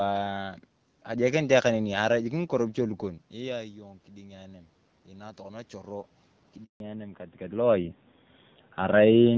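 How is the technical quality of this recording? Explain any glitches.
The recording has three glitches: a slow gain swell, a brief dropout, and a sudden loss of high frequencies.

Automatic gain rising, 3.33 to 6.08 s: Around 3 s the talker's level at the microphone drops by about 15 dB, as if they leaned back. The automatic gain control responds by raising its gain gradually, by about 5 dB over nearly three seconds. You hear the voice and the room noise swell upward together rather than the voice alone recovering.

Handover gap, 6.64 to 6.80 s: The audio drops out completely for 160 ms. This is the call being passed from one network link to another. No speech frames arrive during the switch, so the voice fades within a few tens of milliseconds and stays silent until the new link delivers audio. Whatever was said in that gap is gone.

Fallback to narrowband, 6.80 s to the end: Right after the gap, everything above 4 kHz disappears. 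Before this point, the HD Voice wideband codec carried the higher frequencies cleanly, and the sound fits a rate of about 12.65 kbit/s. The new link brought the call down to an older narrowband codec, which sounds consistent with AMR-NB at around 7.4 kbit/s. The voice turns muffled and duller, with a rougher, more coded texture.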